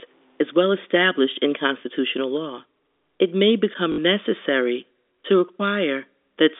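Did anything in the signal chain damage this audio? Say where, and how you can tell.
Yes. From 0.0 to 1.5 s, before "constitutional law", grainy distortion tracks the level, about 40 dB down. The likely cause is truncation to roughly 9 bits in sample-format conversion, with low bit depth without dither. Steady dither hiss would not follow the signal this way.

At 3.92 to 3.98 s, just before "necessary to", a 60 ms robotic stutter buzzes. It fits three 20 ms network packets lost and the last packet repeated. Simple concealment by silence would leave a gap instead.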